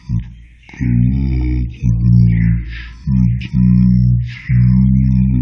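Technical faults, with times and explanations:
Throughout: wrong sample rate. Speech plays at half speed and an octave low, which fits playback near 22 kHz; the spectrogram shows formants halved in frequency and stretched in time.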